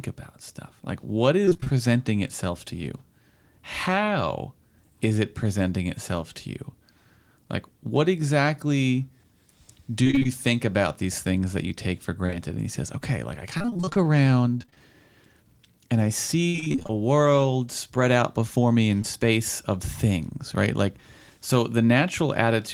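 Repeated packet loss (robotic sound) breaks up this speech clip four times: at 1.45–1.78 s, just before "itself to you"; at 10.04–10.27 s; at 13.58–14.82 s, right after "says okay like I"; and at 16.48–16.92 s. In each stretch the stream loses pieces over and over, which fits 20 ms packets. The receiver patches every hole by extending the preceding sound. Those patches fill roughly a quarter to a half of each span, and the longest single gap reaches 58 ms near 16.5 s, so the voice turns choppy, with fragments missing. Short concealed packet loss also appears as isolated single drops: two back to back at 12.26–12.34 s, right after "that you take for", and one at 19.02–19.06 s. Each time about 20 ms of audio fails to arrive, and the decoder fills it by continuing the last sound before blending back in. This leaves a brief smear or wobble, and a short consonant there can vanish.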